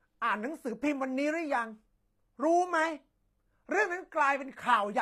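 Throughout the speech, the treble sounds bright but not quite real: s sounds turn gritty and metallic, with a lisping edge. That points to HE-AAC compression, likely at a low rate, which fits about 24 kbps. Only the lower spectrum is coded, and the upper band is rebuilt by copying lower bands upward, so harmonics fail to line up above the crossover. Unlike a plain low-pass codec, the highs are present rather than dull, just synthetic.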